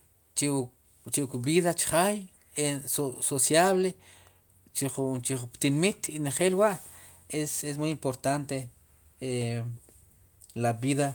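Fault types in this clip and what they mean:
No faults can be heard anywhere in this speech recording.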